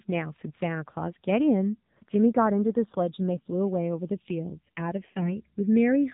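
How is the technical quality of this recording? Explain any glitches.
The recording has two audible problems: narrowband, coded speech throughout, and two short bursts of corruption.

Throughout, the speech sounds muffled and buzzy, with nothing above 4 kHz. This is the AMR narrowband mobile codec, which models the vocal tract from sparse pulses per 20 ms frame. The plainly synthetic edge points to a low mode, around 7.4 kbps.

From 3.34 to 3.48 s and from 5.16 to 5.32 s, the speech turns hoarse and gargly while keeping roughly its pitch and level. These are AMR bit errors: a few percent of the less-protected bits arrived flipped, misplacing excitation pulses and skewing gain and spectrum values.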